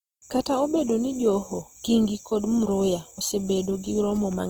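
Opus compression throughout this speech clip: the sound is plainly grainy and rough, with content reaching about 20.2 kHz, likely from CELT-mode coding at a low rate near 16 kbps.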